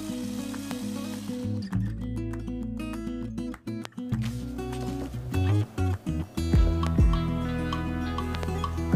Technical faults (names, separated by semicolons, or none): loud pop